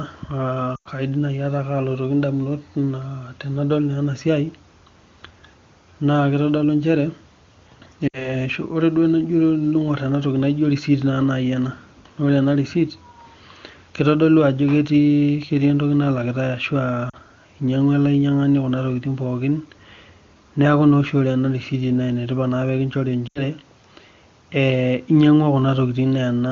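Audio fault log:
0.75–0.88 s, lost AMR speech frames: about 100 ms of audio goes missing. The frames failed their checksum, so the decoder keeps replaying the last good pitch and vocal tract settings while pulling the gain down. You hear the sound smear out and sink toward silence.
8.08–8.31 s, lost AMR speech frames: the same concealment covers a 60 ms gap and comes across as a short, drawn-out dip.
17.09–17.16 s, lost AMR speech frames: this is the shortest one, a 40 ms loss heard as a quick warble.
23.28–23.43 s, lost AMR speech frames: an 80 ms gap stretches and fades. The fade is quicker than it would be in narrowband because the AMR wideband (HD Voice) codec, running at a high rate here, decays concealed frames faster.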